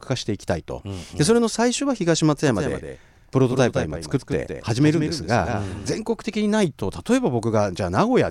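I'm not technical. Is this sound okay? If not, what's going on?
No. From 2.48 to 6.02 seconds there is a doubled audio track, likely from the speech being recorded a second time through a slower route. A quieter copy trails the original by about 0.15 seconds, so the speech sounds echoed before abruptly returning to normal.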